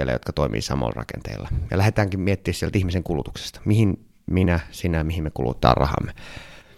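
At 5.54 s, right after "minä sinä mihin me", the speech and its background noise step up together by about 6 dB in a single sample, a sudden gain jump that holds until 6.62 s before dropping back. The likely cause is a digital gain change applied without a ramp. It sounds like an abrupt lift in loudness. On a waveform the envelope forms a flat-edged block, and a spectrogram shows a vertical broadband edge at each boundary.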